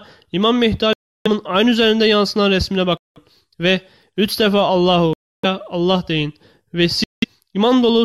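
A likely Bluetooth dropout cuts the sound four times: at 0.93 s for about 325 ms, at 2.97 s for about 186 ms, at 5.13 s for about 302 ms, and at 7.04 s for about 186 ms. In each gap, audio packets missed their delivery window to the headphones and were discarded, so the output falls abruptly silent. Playback then picks up further along, as though the sound had carried on underneath the hole.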